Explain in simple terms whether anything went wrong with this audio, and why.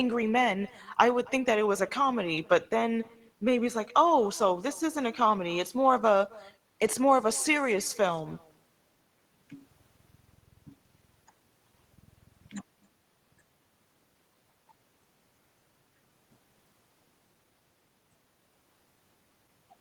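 Every sentence in this speech is trailed by a faint repeat of itself, arriving about a third of a second later and sounding thinner than the original. It lasts the whole clip, start to finish. This is echo with no canceller: the person on the other end is playing the call through a loudspeaker, their microphone picks it up, and nothing strips it out, so the talker's own voice travels back across the connection.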